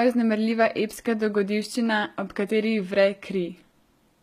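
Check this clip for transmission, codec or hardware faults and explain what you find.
One codec fault runs through the whole speech clip: HE-AAC compression, very likely at a low bitrate, with damage that is plainly audible from start to finish. The s sounds come across gritty and lispy, and the upper register has a bright but synthetic, metallic sheen. That treble is rebuilt by spectral band replication, which copies lower bands upward and fits them to a coarse envelope, so its harmonics fail to line up with the coded range beneath. The degree of damage points to roughly 20 kbps. On a spectrogram, the upper band looks like a smeared, repeated copy of the lower one, and nothing appears above 14.9 kHz.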